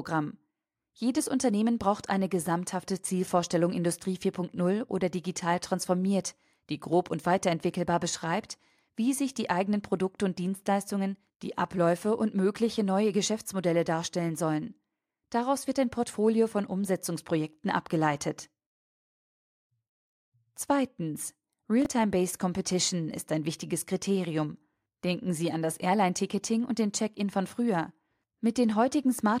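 Chunks out of order at 21.82–21.86 s and after "an das" at 25.73–25.75 s: a 10 ms chunk plays three, then one, chunk late, causing a jumbled moment.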